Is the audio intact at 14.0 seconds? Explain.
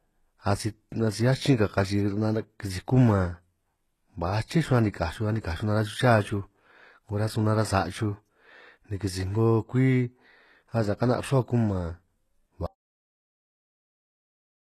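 No. From 12.66 s to the end, the audio drops out to silence: complete silence with no room tone, likely from a lost input or mute while recording continued. Throughout the clip, the sound carries plainly audible HE-AAC compression, likely encoded at about 16 kbps, with nothing above 12.3 kHz and replicated treble that sounds gritty and metallic.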